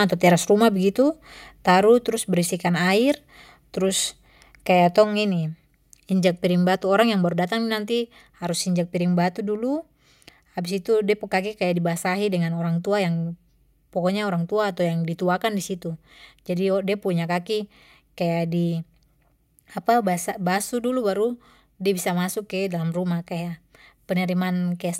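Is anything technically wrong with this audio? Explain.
Yes. There is a microphone volume stepped down fault at 2.04 s and again at 5.04 s. The speech and the background beneath it drop together in a single abrupt step, by about 2 dB at the first point and about 3 dB at the second, and stay at the lower level. The likely cause is the call software lowering the microphone's input volume because it judged the signal too loud.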